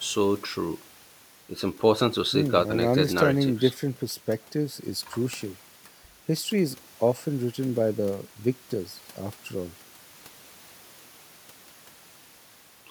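No technical faults can be heard anywhere in the speech; the signal stays intact and continuous throughout.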